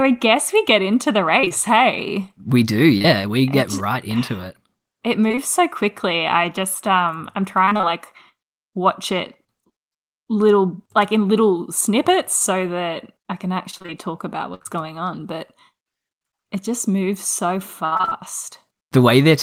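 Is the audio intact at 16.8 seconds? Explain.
Yes, at 16.8 seconds the speech plays through cleanly, with no dropout, click, distortion or other fault at that moment.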